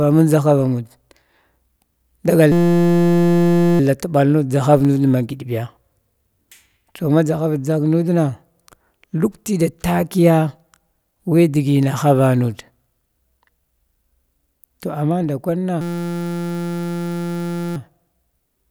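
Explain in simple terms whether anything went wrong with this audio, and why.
Two kinds of fault are present. A system hang loop occurs from 2.52 to 3.80 s and again from 15.81 to 17.76 s. The machine stalled while the sound hardware kept replaying one 5.8 ms slice of its buffer, which fits a 256-sample buffer. That slice repeats about 172 times a second and turns into a steady buzz.

CD scratch ticks appear between 4.85 and 6.33 s. Seven brief ticks, none longer than a couple of milliseconds, mark the spots where a damaged patch on the disc came round. The player could not rebuild that data, so it patched over or silenced those few samples.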